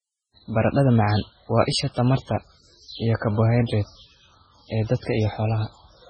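From start to finish the speech carries heavy MP3 compression damage, likely from a very low bitrate around 16 kbps, with nothing above 8.5 kHz. Starved weak components flicker on and off, giving a watery, swirly texture and smeared attacks; a spectrogram shows a hard ceiling and blotchy, patchy bands.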